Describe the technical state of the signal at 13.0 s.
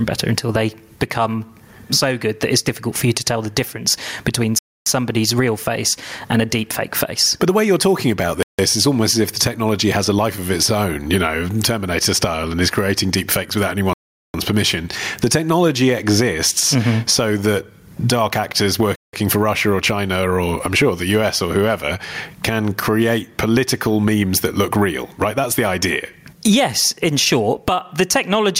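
At 13.0 s you're right in the middle of gain pumping, which runs through the whole speech clip. The gain swings by something like 20 dB under each loud sound, so everything sounds squashed. That's likely the gain cranked far too high with a fast limiter clamping down.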